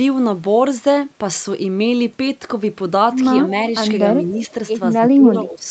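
From 4.99 to 5.67 s, the echo canceller likely lost track of which sound was the near talker and which was loudspeaker echo. This is speech suppressed in double talk, where it turns both down together. In the final stretch of the clip, the speech sags by as much as about 15 dB, in pieces adding up to roughly half a second. It sounds thinned and partly gated against the rest of the audio, which is band-limited to about 8 kHz throughout.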